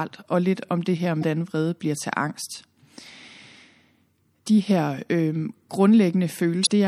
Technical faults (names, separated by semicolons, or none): MP3 compression; damaged data in a compressed stream